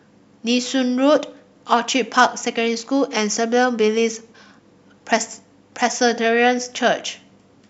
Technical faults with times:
none

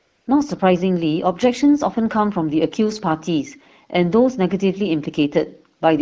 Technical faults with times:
0.00-0.27 AMR comfort noise

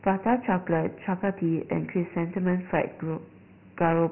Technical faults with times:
0.00-4.11 Dialogic VOX ADPCM

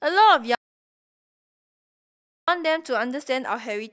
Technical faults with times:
0.55-2.48 audio dropout to silence

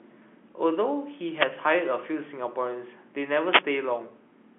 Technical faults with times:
1.33-1.48 wireless microphone noise hit
3.48-3.64 wireless microphone noise hit

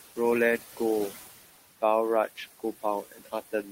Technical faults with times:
0.00-3.71 noise suppressor artifacts
3.03-3.71 speech cut by the noise suppressor

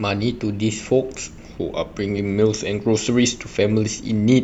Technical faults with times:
none

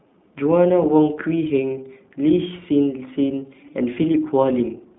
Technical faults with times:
0.00-4.99 iLBC codec

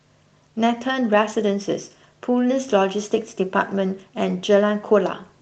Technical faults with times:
none

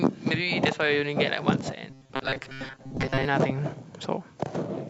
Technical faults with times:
1.90-3.25 robotic sound from repeated short buffers

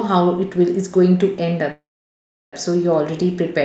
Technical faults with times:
1.71-2.54 call audio freeze

